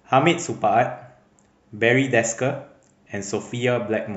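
No audible technical faults appear anywhere in this recording.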